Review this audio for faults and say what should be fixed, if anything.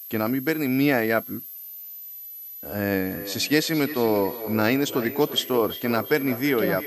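There's a switching supply whistle running the whole way through, a thin high tone wandering between about 11.8 and 12.5 kHz, roughly 15 dB under the speech, from a power supply in an audible burst mode. Swap or filter that supply, or move the recorder off it.

From 3.11 s to the end there's feedback echo between two devices. The speech comes back roughly every third of a second, peaking about 11 dB below the original, because a second device in the room is replaying what this mic sent. Mute or remove the second device in the room.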